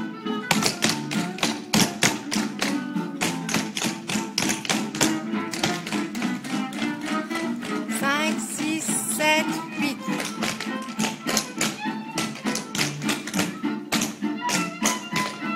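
Nothing is technically wrong with the audio; there are no faults to point to, so there are no times or causes to give.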